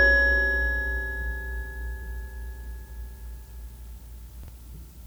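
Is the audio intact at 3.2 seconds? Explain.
Yes, the audio is intact at 3.2 seconds, with no fault audible at that moment.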